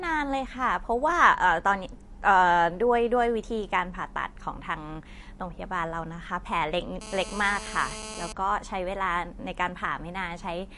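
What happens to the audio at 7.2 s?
A nearby GSM phone on a call is pulsing its transmitter about 217 times a second, and the audio circuit rectifies those bursts from 7.01 to 8.32 s. The result is a hard, raspy buzz with many harmonics, sitting about 12 dB below the speech and holding steady throughout. Underneath, likely MP3 compression at a low rate, fitting roughly 48 kbps, leaves nothing above 11.3 kHz and a plainly audible watery, swirly smearing of the speech.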